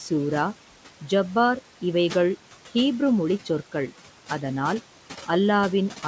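From start to finish there are noise suppressor artifacts. The suppressor keeps judging which bands hold steady background noise and pulls them down by about 11 dB, frame by frame, so the room noise, sitting about 17 dB under the speech, dips in the gaps and swells back up beneath the talking. Everything stops at 8 kHz, consistent with a wideband call codec like G.722.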